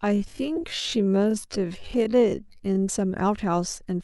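Right from the start, up to about 2.82 s, the speech runs at half speed but the pitch stays put, so this is most likely a time-stretched section. Software stretched that stretch of audio to fill more time and held the pitch by repeating short slices rather than slowing the playback. That's why it drags, with syllables drawn out. Then at 2.82 s the pace snaps back to normal.

Inside that slowed part, from 0.56 to 0.58 s, there's a corrupt frame decoded. A single compressed frame arrived with flipped bits and the decoder played it anyway. Misread gains or codes put energy at the wrong frequencies for the length of that one frame, peaking somewhere around -15 dBFS. What you hear is a short chirpy blip.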